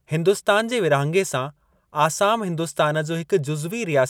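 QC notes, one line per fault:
0.60 s and 2.24 s, dropped samples: a single sharp click at each point, the first just before "जे विरहाङे". Likely a handful of samples went missing, so the waveform jumps straight to a later value, a step far too brief to lose any audible sound.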